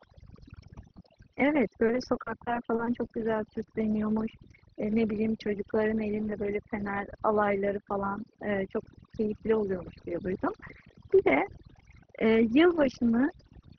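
Overdone noise removal runs through the whole speech recording. Noise reduction set too hard mutes frequency bands near the noise floor, leaving a lowered background with twinkling specks. Repeated packet loss (robotic sound) runs from 1.20 to 3.68 s, where lost audio is patched by extending the preceding sound, giving choppy speech with short gaps up to 40 ms. Underneath, the call codec's band limit can be heard, with nothing above about 6 kHz.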